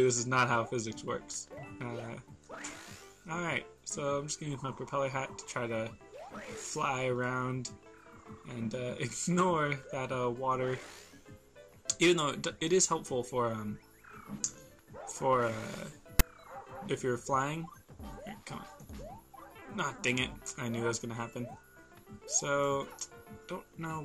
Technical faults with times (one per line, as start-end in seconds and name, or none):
16.19 file tags played as audio